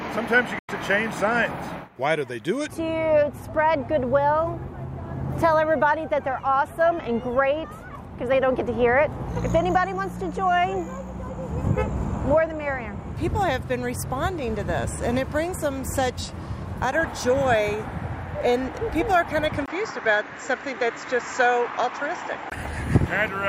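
At 0.59 s the sound drops abruptly to silence, fading out over just a few milliseconds, and returns at 0.69 s. That gap of about 96 ms is a digital broadcast dropout: the receiver muted after losing what fits roughly three frames, and that audio is gone.

From 19.66 s to 22.52 s the sound turns duller, with nothing above 7.6 kHz, a new background hiss about 35 dB below the signal, and a 20 ms silence at the change, though the loudness stays much the same. This is likely an input switched to a poorer device.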